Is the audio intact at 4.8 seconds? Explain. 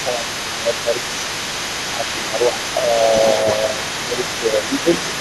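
No. Speech suppressed in double talk runs from 2.74 to 4.89 s, so 4.8 s falls near its end. The talker's level dips, at its deepest by about 5 dB, and the dips and losses of brightness add up to roughly a second and a half across that span. This is likely an echo canceller that could not tell the near talker from loudspeaker echo while both were active, so it turned everything down together.

The other side's voice leaking through is also present at 4.8 s, since a second, fainter voice sits under the main speech for the entire clip, roughly 10 dB below it. It likely comes from the far end playing on a loudspeaker and getting back into the microphone because the echo canceller did not remove all of it.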